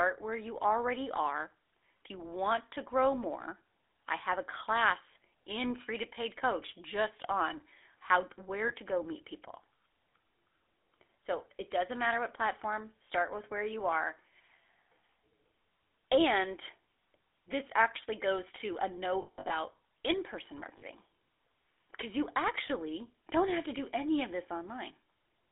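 A speech recording carried over a GSM full-rate codec from start to finish, squeezed into a telephone band of roughly 300 Hz to 3.5 kHz. The codec damage is plainly audible: a buzzy, gravelly grain from rebuilding the voice with a coarse, regularly pulsed excitation through a vocal-tract model, consistent with the 13 kbps full-rate scheme. Plain band-limiting would only dull the sound. This adds roughness inside the band, not just a missing top end.

Lost GSM frames break in three times. After "just on how" at 8.68 to 8.72 s, one frame of about 20 ms is lost. Between "actually goes to a" and "in person" at 19.22 to 19.53 s, about 200 ms goes missing, scattered across 280 ms, the longest run around 70 ms. Just after "in person", at 20.78 to 20.84 s, about 40 ms is lost. The decoder repeats the last good frame, so each gap rings with a rough metallic hold and never goes abruptly silent as a plain dropout would.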